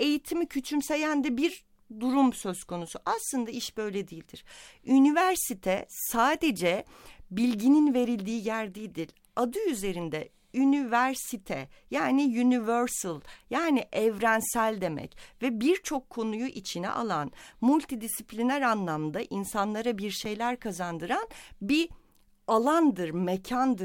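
At about 20.25 s, right after "multidisipliner anlamda insanlara bir" and before "kazandıran bir", there's a block of digital silence, a 5.8 ms stretch where the speech drops straight to silence and snaps back. The gap fits a 256-sample buffer that wasn't filled in time, or that got zeroed out. There's no fade at either edge, and it's too short to hear as a hole, so it just comes across as a sharp little tick in the speech.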